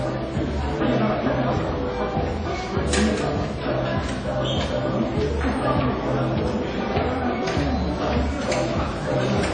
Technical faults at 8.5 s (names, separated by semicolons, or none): WMA compression